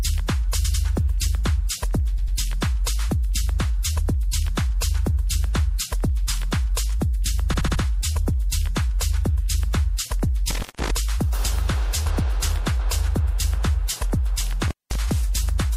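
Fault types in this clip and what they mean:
MP3 compression: A watery, swirly quality with dulled treble runs through the whole clip, most likely from MP3 coding at a low rate, consistent with about 64 kbps. A spectrogram shows a hard ceiling on the high frequencies and small patches flickering on and off between frames.
Repeated frames: The same short slice of audio plays again, heard as stutters at 0.64 s and 2.17 s, where a 96 ms block sounds three times in a row, and at 7.53 s, where a 72 ms block sounds five times. On a waveform these show as identical back-to-back segments.
Intermittent contact: The sound briefly drops out with crackle at the edges, like a loose plug opening and closing, for about 0.17 s near 10.5 s and about 0.2 s near 14.63 s. A waveform shows a near-flat gap bordered by sharp spikes, and a spectrogram shows a thin vertical blank band.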